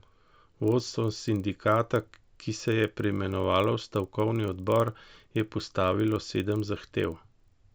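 Throughout, a resampler restarted on every 40 ms block, likely a 16 kHz to 48 kHz conversion, leaving edge errors heard as a 25 Hz ticking buzz under the speech.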